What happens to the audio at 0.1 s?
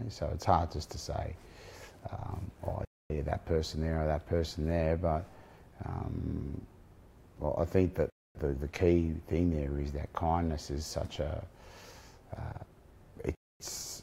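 Nothing goes wrong at 0.1 s; the audio plays through that moment intact, with no dropout, click or distortion.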